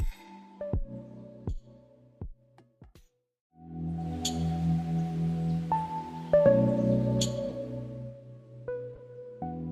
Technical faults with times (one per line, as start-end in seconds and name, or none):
4.05-4.07 corrupt frame decoded
7.50-7.54 corrupt frame decoded
8.94-9.00 corrupt frame decoded